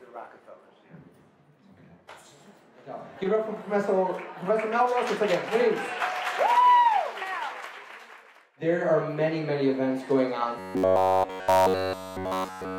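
From 10.59 s to the end at 12.79 s, the sound collapses into a rigid, metallic buzz pitched near 93.8 Hz. It still loosely tracks the shape of the original, but every stretch sounds mechanical and flattened. This is robotic sound from repeated short buffers. New audio likely stopped arriving in time, so the playback kept looping a tiny slice of about 10.7 ms, which fits that pitch, across essentially the whole span while the real audio was skipped.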